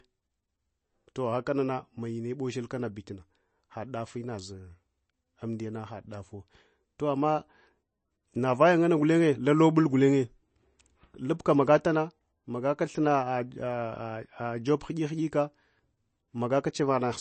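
Speech runs the full length with plainly audible MP3 compression damage. Nothing reaches above 8.3 kHz, so the top octave is missing and s sounds lose their edge. Weak spectral detail switches on and off between frames, which gives a watery, swirling texture and smears consonant onsets. The likely cause is an MP3 encode at a bitrate starved for speech, which fits a rate of about 33 kbps.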